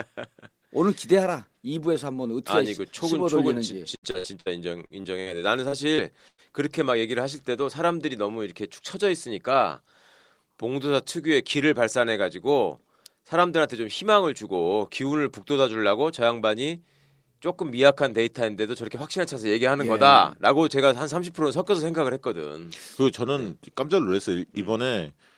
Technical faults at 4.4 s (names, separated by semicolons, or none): repeated packet loss (robotic sound)